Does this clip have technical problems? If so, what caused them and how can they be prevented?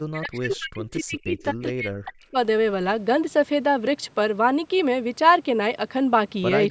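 Yes. From 0.07 to 2.37 s the speech repeatedly dips and breaks into pieces, sinking at its deepest by roughly 40 dB, with about two seconds affected in all. This is speech suppressed in double talk, most likely because both sides spoke at once and the echo canceller, unable to tell this talker from the loudspeaker echo, turned everything down. Using headsets, or a canceller with better double-talk detection, keeps the near talker intact.

Between 1.39 and 1.44 s a brief, faint scrap of delayed sound appears, about 30 dB below the speech and trailing it by 257 ms. This is an echo leak, likely from a far end playing the call on a loudspeaker whose echo canceller let a fragment of its microphone pickup through and send it back. The call's band limit of 8 kHz is heard as normal. Headphones at the far end, or better-tuned echo cancellation there, prevent it.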